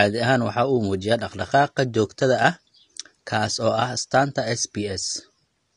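AAC compression damage runs throughout this speech clip, plainly audible from start to finish. Nothing is present above 10 kHz, so the top end sounds dull and closed in, and sibilants and sustained sounds take on a fizzy, warbling smear. The likely cause is AAC-LC coding at a low bitrate, which fits roughly 32 kbps. At that rate the encoder lowers its cut-off and quantises each frame's frequency lines coarsely, leaving thin, swirling gaps in the spectrum.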